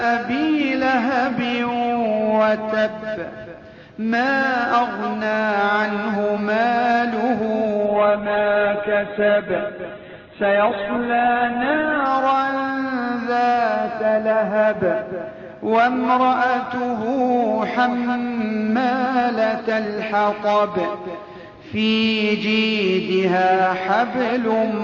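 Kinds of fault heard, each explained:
Call bitrate drop: from 7.87 to 12.13 s the encoder gets far fewer bits, so the sound turns rough and muffled, and the spectrogram loses everything above 4 kHz.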